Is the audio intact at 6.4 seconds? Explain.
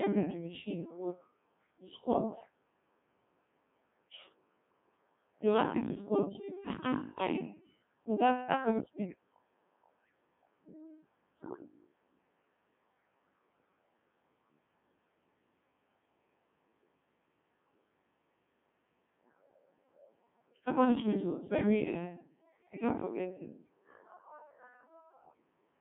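No. The moment falls inside a burst of bit errors on digital voice radio running from 6.33 to 6.42 s. Flipped bits reached the decoder at a rate of around 7 percent. Here each bit sets the pitch, level, voicing or spectrum of a whole frame. So the synthetic voice jumps abruptly in pitch and loudness and breaks into a brief warbling bleep. The span fits two corrupted frames.

Underneath, the whole clip is carried by the Codec 2 vocoder, and the damage is heavy. Only pitch, voicing, energy and a spectral envelope are sent. The decoder rebuilds the speech from sine waves, so the original waveform is gone. The result sounds robotic and buzzy, confined to a band from 150 Hz to 3.5 kHz. The thin, synthetic texture fits a very low bitrate near 1.6 kbit/s.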